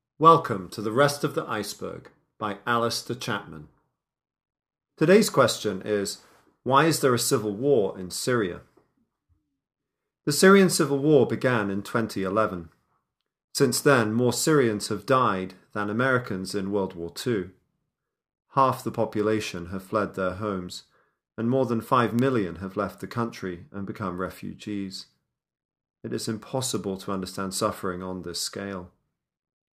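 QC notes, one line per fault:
22.19 s and 26.75 s, bit error spike: a single sharp broadband tick, about -14 dBFS then about -20 dBFS. Each occurs just before "have left the country" and "to understand suffering on". A flipped bit briefly jumps one or two samples.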